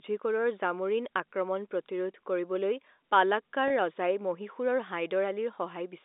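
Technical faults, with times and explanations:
2.12 s and 3.68 to 3.70 s, packet loss with pitch repetition: right after "জামোৰিন আক্ৰমণ", and again later, about 20 ms of audio drops out, which fits a single lost packet each time. The receiver fills each gap by looping the last pitch period, so the sound briefly holds on a slightly buzzy tone. On a spectrogram, the harmonics run flat and unchanging across the gap. The waveform shows identical repeated cycles, heard through the 250 Hz to 3.7 kHz telephone band of the G.711 line.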